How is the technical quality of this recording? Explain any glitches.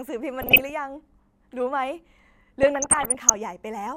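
The recording is marred by two bursts of DAB burbling, from 0.41 to 0.70 s and from 2.63 to 3.36 s. Weak reception let a small fraction of bit errors, under one percent, slip past error correction into the MP2 data. Corrupted samples put short blips of noise into single sub-bands.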